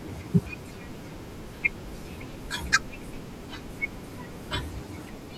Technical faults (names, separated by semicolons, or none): none